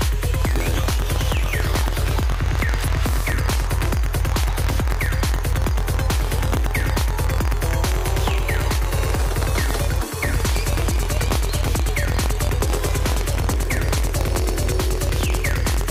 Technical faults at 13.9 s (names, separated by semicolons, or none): buffer tearing